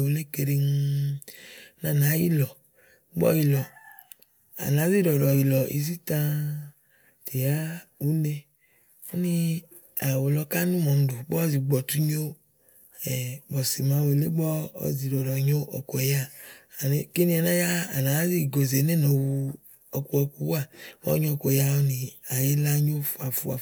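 No technical faults can be heard anywhere in the speech recording. Nothing in it calls for a timestamp or a cause.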